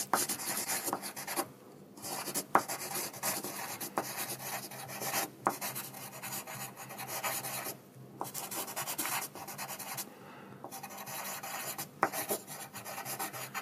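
A short chirp-like blip cuts through the sound from 0.64 to 0.67 s, and a second, slightly longer and quieter one follows from 12.45 to 12.50 s. Both are corrupt frames that were decoded: flipped bits in the compressed data made the decoder misread gains or codes, so energy landed at the wrong frequencies. The first peaks around -30 dBFS and spans what sounds like one frame. The second, nearer -35 dBFS, suggests about two.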